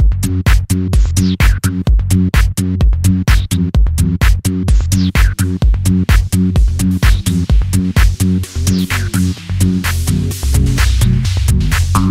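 Nothing goes wrong anywhere in this recording, so there's no technical fault to point to at any moment.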